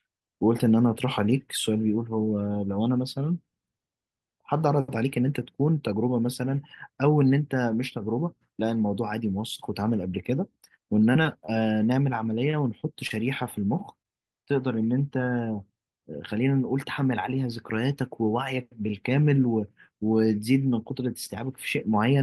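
Short concealed packet loss at 11.13, 11.23 and 11.47 s drops about 20 ms each time, bridged by extended pitch or noise, heard as a brief smear where a sound can vanish. At 12.51 s a short stall from a late packet instead holds the last sound for 19 ms with nothing lost, a slight drag or buzz before resuming. The concealed losses return at 12.81, 13.07 and 14.02 s, each again losing about 20 ms.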